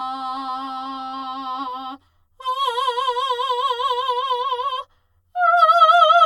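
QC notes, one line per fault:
throughout: channel delay (comb filtering); one channel lags roughly 10 ms, so the mono sum cancels at evenly spaced notches starting near 50 Hz, leaving the music hollow.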